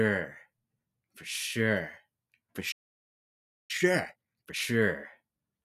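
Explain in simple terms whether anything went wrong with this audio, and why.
Two things go wrong in this recording of everyday sounds.

At 2.71 seconds the sound suddenly cuts out. Nothing plays until 3.71 seconds, a gap of almost one full second. This is a playback stall. The player most likely ran short of incoming audio, or was briefly held up by other work on the device. It had nothing to send to the speakers, so it fell silent until it could continue.

From 3.71 to 4.67 seconds the sound rushes along. This is time-compressed catch-up. After the stall, the player was behind. To get back on schedule, it cut out many tiny slices and blended the remaining pieces together. Here it plays at twice the normal speed. The pitch stays the same, so nothing sounds squeaky. It just feels hurried.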